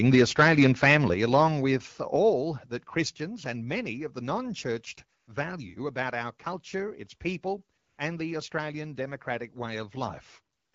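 From 0.05 to 0.98 s the loudest speech peaks sound harsh and crackly, about 7 dB beyond what the converter can hold. This is microphone overload, likely from input gain set too high, flattening a few percent of samples. A shorter burst returns at 1.34 to 1.37 s, about 2 dB over.

At 0.15 s, during that first distorted stretch, the level drops about 2 dB in one step. At 1.14 s it drops again, about 6 dB. Both voice and background fall together. This is the microphone volume being stepped down, likely by call software reacting to the clipping.

Three pauses lose their real background to a smooth, steady hiss. This happens at 5.19 to 5.27 s, 7.77 to 7.97 s and 10.55 to 10.73 s, lasting 80, 200 and 180 ms. This is AMR comfort noise. The sender judged the talker silent and stopped sending speech frames, so the receiver synthesised filler noise from a rough level and spectrum description.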